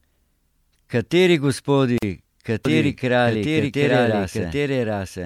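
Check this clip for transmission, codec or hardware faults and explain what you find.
Two faults are present in this speech clip.

A gap at a join of encoded pieces opens from 1.98 to 2.03 s, lasting 44 ms. Separately encoded pieces were joined without trimming the encoder's start delay and end padding. Continuous sound stops, then resumes where it left off.

A doubled audio track begins at 2.65 s and runs to the end. A second copy, about as loud as the original, trails it by roughly 0.7 s. It has no decay or room colour and starts abruptly. The likely cause is a second, slower capture path mixing the same audio back in.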